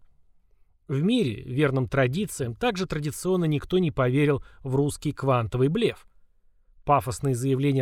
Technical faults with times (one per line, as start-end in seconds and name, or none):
none